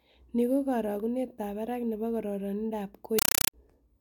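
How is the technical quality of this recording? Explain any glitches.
The recording has one serious glitch. From 3.19 to 3.54 s, right after "barak ne po kororindoap", the speech is replaced by a compressed stream played as audio. Undecoded data bursts of about 5.3 ms, each followed by silence, repeat 31.25 times a second, which fits an AC-3 stream. The result is very loud, chattering static. That steady 31 Hz burst-and-gap rhythm separates it from a smooth noise burst or digital clipping.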